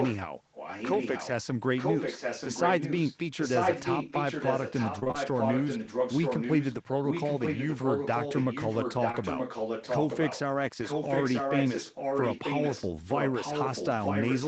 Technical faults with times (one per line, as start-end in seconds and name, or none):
0.00-0.16 echo leak
0.53-1.43 echo leak
1.77-10.40 echo leak
4.99-5.16 repeated packet loss (robotic sound)
9.12-9.15 short concealed packet loss
10.83-14.47 echo leak